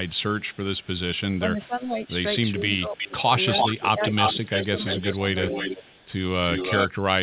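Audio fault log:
0.06–1.2 s and 2.95–6.88 s, echo leak: there's a delayed copy of the speech trailing the talker. It's faint in the first stretch, about 30 dB down and 406 ms late. In the second it's almost as loud as the original, about 5 dB below, at 341 ms. The likely cause is a far-end echo canceller letting loudspeaker pickup slip back into the call.
1.4–1.96 s, 2.57–3.3 s and 3.91–5.9 s, speech suppressed in double talk: the talker's level sags in patches while the other side is also talking. The drop is around 10 dB in the first span and up to about 15 dB in the later two. It adds up to a few tenths of a second in each of the first two and about 0.7 s in the last. This is likely the echo canceller ducking everything when it can't tell the talker from the echo.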